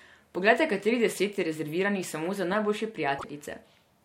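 Just after "za najboljše", from 3.18 to 3.24 s, the speech breaks up for about 66 ms, roughly two and a half frames of 26.1 ms, and resumes further ahead. The likely cause is a broken MP3 bit reservoir: frames were lost, so the following ones pulled borrowed data from the wrong bytes and decoded as garbage. On a spectrogram the harmonic bands break off abruptly along a vertical edge, and the waveform shows a sharp discontinuity.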